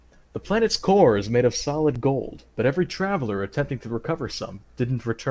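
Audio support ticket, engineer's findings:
Block of digital silence at 1.95 s: short tick/dip, about 7 ms. Probable cause: output buffer not filled in time, samples zeroed. Waveform shows a flat line near zero with abrupt edges. Spectrogram shows a thin broadband stripe at each edge around a blank gap, within the call path's 8 kHz band.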